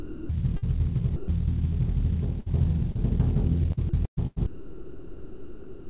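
The clip is music heard over a call path whose band stops at 4 kHz, which fits G.711 mu-law at 64 kbps. From 0.00 to 0.64 s the music is chopped by the voice detector, most likely because the sender's detector kept switching transmission on and off. About 0.35 s of that stretch is steady comfort noise instead of music. From 1.16 to 1.28 s the sound is dropped by the voice detector. The sender likely treated the music as background and stopped sending. For 120 ms the music gives way to steady comfort noise, then returns when the detector triggers again. That 120 ms of music is simply gone. At 2.40 to 2.48 s there is a burst of packet loss. About 60 ms of audio never arrived. The receiver stretched the last sound across the gap and faded it down. A held tone or fading hiss replaces the music. Playback then picks up further along, with the missing part skipped. At 2.92 to 3.01 s there is a short concealed packet loss. 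About 40 ms failed to reach the decoder in time. Roughly 30 ms of it was filled by continuing the previous sound. The filled audio then blends back into the real signal. It is heard as a brief smear or wobble, and the timing shifts by a couple of milliseconds. From 3.72 s to the end the music is chopped by the voice detector again. Here about 1.74 s of the stretch is comfort noise. The music breaks up repeatedly.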